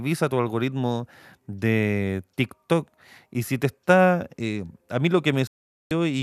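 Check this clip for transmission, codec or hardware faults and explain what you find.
One transmission fault is present. After "a mí lo", a digital broadcast dropout mutes the speech from 5.47 to 5.91 s with a 3 ms fade. The receiver silenced failed frames rather than concealing them, so that speech is lost.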